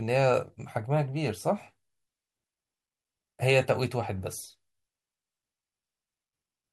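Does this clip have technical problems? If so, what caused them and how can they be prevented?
Yes. A Bluetooth stutter occurs at 0.48 to 0.50 s in this speech. Data arrived late or was lost. The receiver replayed its last slice of about 20 ms, which fits one dropped packet. The speech then resumes slightly ahead. Keeping the devices close and away from 2.4 GHz interference prevents it.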